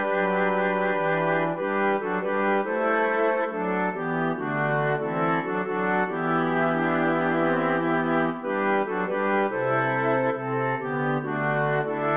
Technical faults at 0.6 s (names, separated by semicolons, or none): none